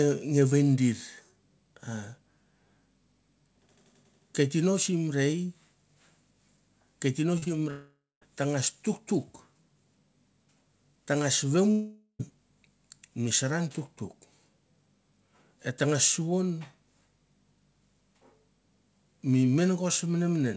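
Speech recorded over a call path whose band stops at 8 kHz, which fits G.722 at 64 kbps. Short concealed packet loss occurs at 7.38 to 7.44 s and again at 7.44 to 7.48 s: roughly 40 ms and then 20 ms of audio never arrived, and the decoder extrapolated the preceding sound before blending back in, leaving a brief smear across the joins. At 7.70 to 8.23 s and 11.71 to 12.21 s, the sound stretches into a fading buzz and then goes quiet before resuming further on, with about 0.22 s and 0.09 s of silence respectively. This is likely a long network dropout, where about half a second of packets was lost each time and the concealment ran out.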